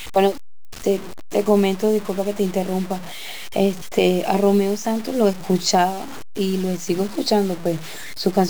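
Across the whole clip, grainy distortion tracks the speech and roughens quiet stretches. The likely cause is low bit depth without dither: 6-bit truncation, with error only roughly 20 dB below the signal.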